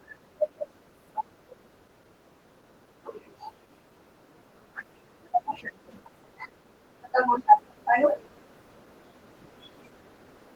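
Throughout the speech there is a plainly audible hoarse, slightly robotic graininess, though the top end still extends to about 20.1 kHz. This is Opus voice compression: a SILK-plus-CELT hybrid coding the excitation coarsely, which fits a bitrate around 16 kbps.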